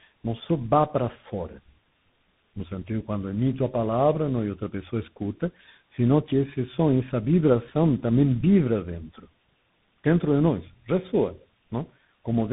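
Tandem speech coding runs through the whole clip: the speech sounds like it passed through a GSM full-rate stage and then two CVSD stages, with A-law G.711 links between them. Each coder re-encoded the previous one's damaged output, so the errors compound. The result is rough, muffled and warbly, with a grainy edge from CVSD's slope tracking. Nothing is audible above 3.8 kHz, which fits a narrowband telephone path.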